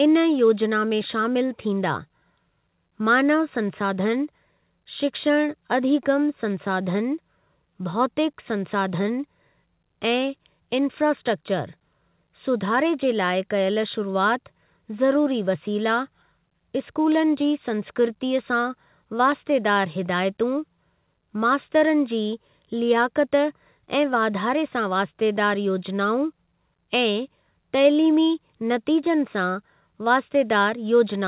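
No technical faults are audible.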